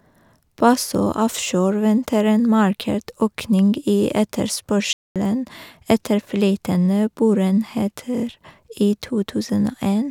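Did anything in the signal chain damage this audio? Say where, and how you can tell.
Yes. A playback stall cuts the speech off mid-flow at 4.93 s and leaves a flat silence until 5.16 s, about 0.23 s. The likely cause is the player starving for data or its thread being blocked. A clean quarter-second of silence, rather than a short smeared gap, separates it from a dropped network packet.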